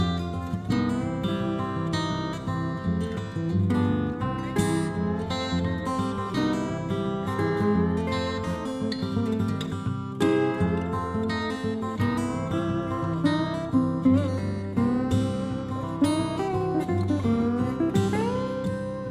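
Nothing technically wrong can be heard in this audio. No fault turns up at any point in the recording.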